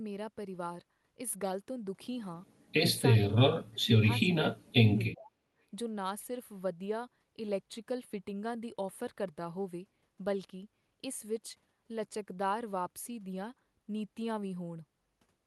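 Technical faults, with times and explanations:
3.27–4.76 s and 5.11–5.34 s, speech suppressed in double talk: the speech drops away in pieces, by about 35 dB at its deepest across roughly a second in the first stretch, then by about 25 dB for around 0.2 s in the second. This is likely an echo canceller that heard both ends talking at once, could not tell the near talker from loudspeaker echo, and turned everything down. Packet loss would leave abrupt, clipped-off gaps. Here the level dips and returns with the speech, over a call path whose roughly 12 kHz top end fits Opus at about 32 kbps.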